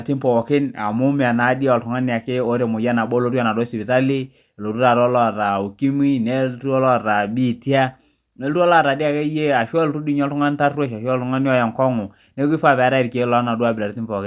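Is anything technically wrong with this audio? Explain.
No, no technical faults heard.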